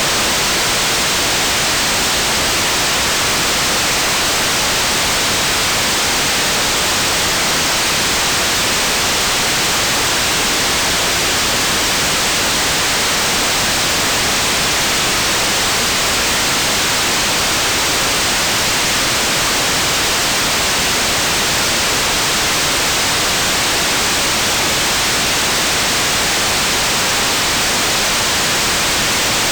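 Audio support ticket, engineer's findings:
Nothing stood out on listening that would warrant a ticket entry.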